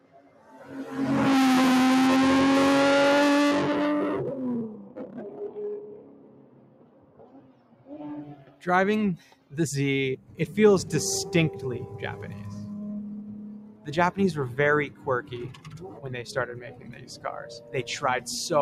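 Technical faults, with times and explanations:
Throughout: noise suppressor applied to music or sounds. A speech-tuned suppressor is left running on this material. It treats anything steady, along with any ambience or tail, as noise to be pulled down, so the level keeps swinging by about 15 dB. Sharp onsets slip through, but whatever sustains after them gets pushed under, which gives the whole clip a pumping, thinned-out feel.
0.00–0.71, 4.68–7.92, 8.35–8.64, 9.18–9.53, 10.18–10.39, 13.51–13.88, 14.89–17.25, 17.59–17.74 s: sound cut by the noise suppressor. In these spots the suppressor clamps down harder than usual, by about 13 dB at its deepest and closer to 7 dB in the last short one. The long stretches from 4.68 to 7.92 s and 14.89 to 17.25 s are the longest, with held sound sinking away and decays chopped short.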